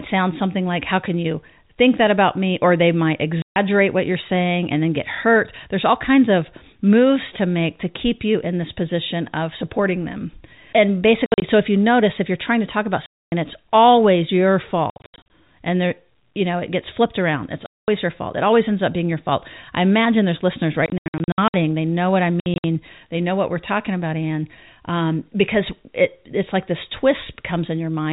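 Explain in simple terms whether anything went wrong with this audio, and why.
Packet loss filled with silence: pieces of the audio stream, apparently 20 ms each, never arrived, so silence was played instead. The speech cuts out with hard edges at 3.42 s (after "they might"), 11.26, 13.06, 14.9, 17.66, 20.86 and 22.4 s. Some gaps are broken up and stretch over as much as 0.68 s.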